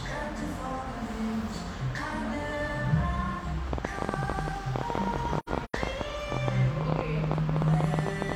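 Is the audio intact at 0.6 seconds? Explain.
Yes, at 0.6 seconds the audio is intact, with no dropout, click, distortion or other fault at that moment.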